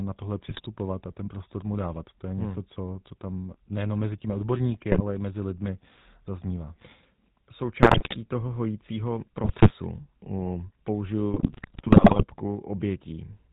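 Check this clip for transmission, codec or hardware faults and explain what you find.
Two faults are present: a coarse mobile-phone codec across the whole speech clip, and five bursts of corrupted decoding.

The GSM full-rate codec runs throughout, at a quality that fits the 13 kbps full-rate coder. It models the vocal tract and excites it with a thinned, regularly spaced pulse train, discarding everything above 4 kHz. The voice comes out dull-topped, with a plainly audible buzzy, gravelly roughness.

GSM bit errors strike at 0.49–0.66 s (after "na tohle", before "a ten prostor mu"), 4.92–5.01 s (after "nejenom mezi těmi odborníky", before "i mezi lidmi zaznívá"), 7.82–8.17 s, 9.44–9.73 s (after "toho hojícího"), and 11.34–12.25 s. Corrupted filter, pitch and gain values reach the decoder, warping the spectrum and level frame by frame. The result is squawks, pops and gargling, longest in the final burst.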